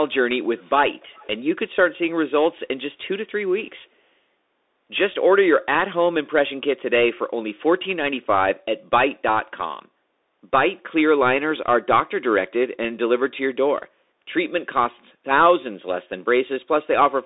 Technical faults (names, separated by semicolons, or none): Bluetooth CVSD headset codec; echo leak